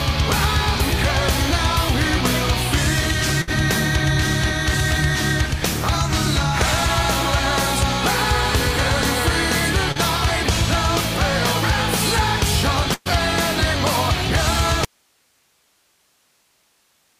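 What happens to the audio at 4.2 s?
Nothing goes wrong at 4.2 s; the audio plays through that moment intact, with no dropout, click or distortion.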